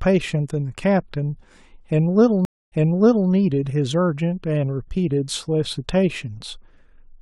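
At 2.45 s, a stream reconnect. The speech drops out for about 0.27 s. The restarted decoder then resumes 0.58 s earlier, repeating speech until 3.30 s.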